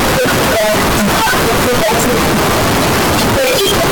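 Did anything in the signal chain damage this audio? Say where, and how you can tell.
Yes: float read as integer, throughout the speech. The waveform sits as a near-square block at an almost fixed, high level, harsh and very loud, with background noise as loud as the voice, yet pitch survives. This likely comes from a sample-format conversion stage where 32-bit float data was read as 32-bit integer, so sign and exponent bits set each value.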